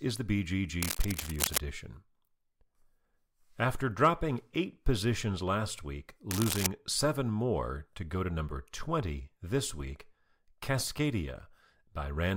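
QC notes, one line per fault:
0.80–1.58 s and 6.31–6.68 s, cable scratch noise: a worn cable, connector or control was likely moved, making its contact resistance flicker rapidly and adding dense, uneven noise bursts, heard as scratching only a few dB below the speech, the second between "eight positions last week" and "seven more to go".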